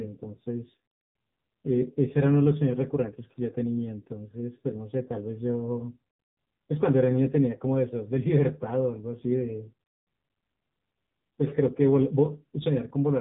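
AMR narrowband mobile codec damage runs throughout the speech: nothing above 3.8 kHz survives, and the heavy buzzy, synthetic coloring comes from a pulse-driven vocal-tract model squeezed into a very low bit budget, which fits one of AMR-NB's lower modes near 6.7 kbps.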